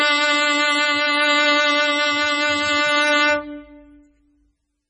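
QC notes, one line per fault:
Throughout, MP3 compression. The music has nothing above 9.6 kHz, so the top end sounds dull. The damage is heavy: weak detail swirls and warbles as it drops in and out. Attacks smear. This likely comes from an MP3 encode at a very low bitrate, near 16 kbps.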